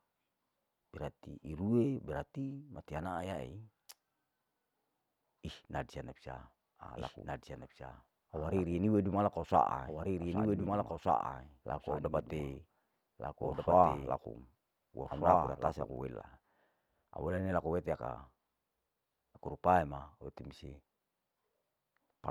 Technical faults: doubled audio track

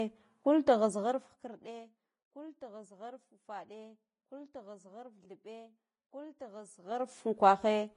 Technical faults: Vorbis compression; zipper noise

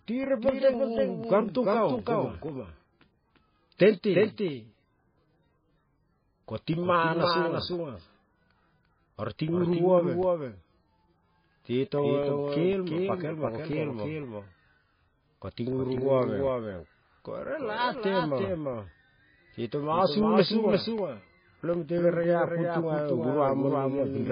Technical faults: doubled audio track; MP3 compression

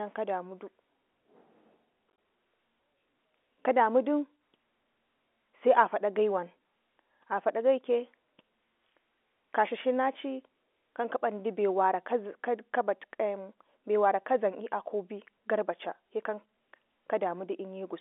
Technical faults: packet loss filled with silence

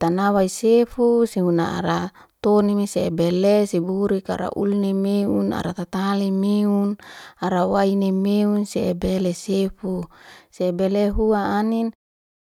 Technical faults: none

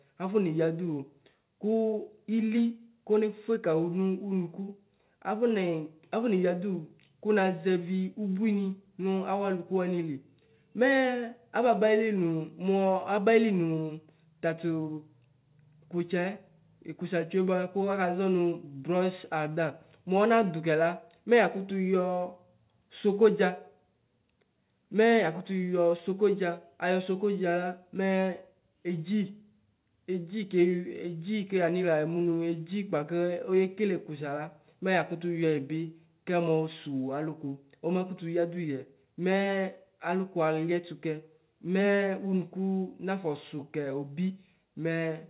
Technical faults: none

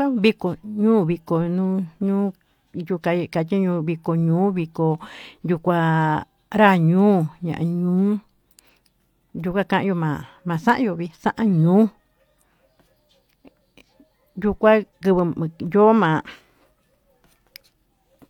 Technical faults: none

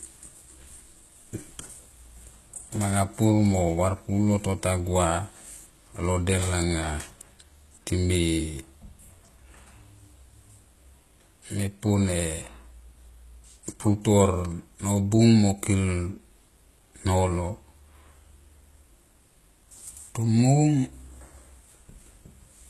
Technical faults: HE-AAC compression

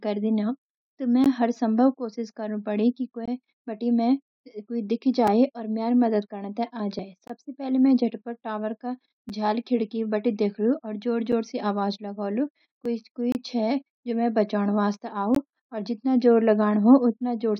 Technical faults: gap between stream segments; dropped buffer (overrun)

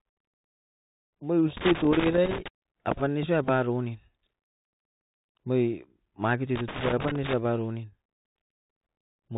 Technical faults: Bluetooth CVSD headset codec; loose connector crackle; Bluetooth headset packet repeated

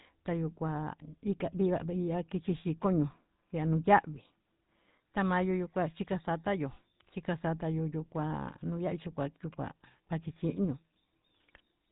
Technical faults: GSM full-rate codec

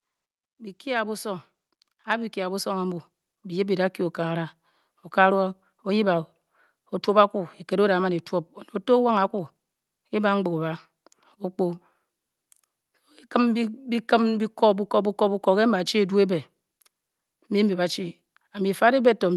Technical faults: automatic gain rising

